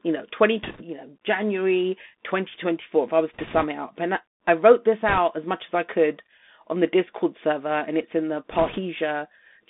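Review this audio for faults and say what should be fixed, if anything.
The whole clip runs through a Bluetooth CVSD headset codec. The band stops near 250 Hz and 3.6 kHz, and the one-bit slope tracking leaves scratchy s sounds and a granular hiss, which fits a 64 kbps CVSD link. Use a wideband headset profile, such as mSBC, or a wired mic.

There are bit errors on the Bluetooth voice link at 0.63–0.83 s, 3.34–3.65 s, 5.09–5.18 s and 8.51–8.79 s. Each brings a rushing crackle rather than clicks, at around a percent or two of bits flipped. Keep the headset closer to the receiver and away from 2.4 GHz interference.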